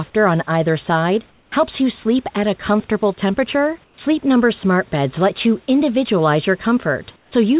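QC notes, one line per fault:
1.30–1.52 s, 3.84–3.98 s, 7.16–7.32 s: comfort noise in place of the background. In each gap, after "on either side", after "at a comfortable temperature", and near the end, the room hiss goes flat and featureless and about 5 to 7 dB quieter, likely receiver-generated fill during discontinuous transmission.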